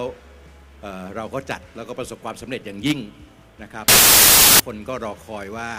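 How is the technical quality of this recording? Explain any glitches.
The recording has one clear fault. From 3.88 to 4.60 s, samples built from the wrong bytes: the decoder assembles each sample with its bytes misaligned or swapped, so rapidly varying low-order bits dominate the values. The result is a burst of loud, harsh broadband noise.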